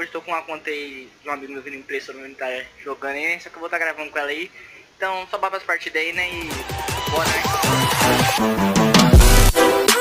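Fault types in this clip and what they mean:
Low bit depth with noise shaping: From 7.19 s to 9.99 s the audio is held at only 8 bits. That coarse rounding leaves an error in every sample. Noise shaping feeds the error back so it is pushed up into the high frequencies. The result is a steady, thin hiss that climbs sharply toward the top of the band. It sits high in level, roughly 20 dB below the sound itself, and stays constant through to the end.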